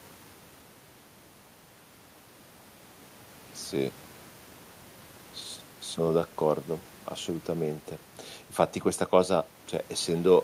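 No faults to report: the speech runs without dropouts, glitches or level problems at any point.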